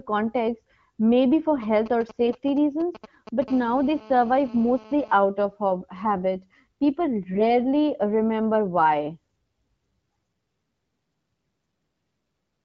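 Right after "context maybe for", at 1.62 s, a nearby 2G phone starts putting out GSM signalling bursts until about 3.44 s. The phone isn't in a full call here, just doing its signalling, so its radio transmits in short groups of bursts. The audio circuitry rectifies them into that galloping dit-dit-dit of brief 217 Hz buzzes, at roughly 15 dB below the speech.

Layered inside that stretch, from 2.26 to 2.32 s, you get the first AMR bit errors. The lightly protected bits of a few frames came through flipped, and the span fits about three 20 ms frames. Because the checksum on the critical bits still passed, the decoder used them anyway. The excitation pulses land in the wrong places and the finer pitch, gain and spectral values drift, so the speech keeps its rough pitch and level but goes briefly hoarse and gargly.

Straight after, from 3.48 to 5.13 s, the same phone is in an active call, and that gives the classic GSM phone buzz. 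The handset transmits 217 times a second and the rectified pulses become a hard, raspy 217 Hz buzz full of harmonics. It's nearly steady, unrelated to the speech, and sits about 23 dB under it. It cuts out just before "out of".

AMR bit errors come back from 7.32 to 7.50 s, ending just before "remember why". This span is longer and points to about five damaged frames, and you hear the same scratchy, gargly roughness over that short stretch. Through all of this the AMR-WB coding sounds like its 12.65 kbit/s mode, with the light codec damage you'd expect at that rate.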